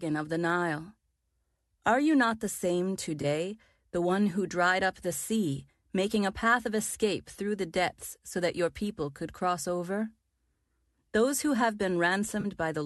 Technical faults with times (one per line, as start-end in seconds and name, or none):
3.21-3.25 AAC frame loss with concealment
12.40-12.46 AAC frame loss with concealment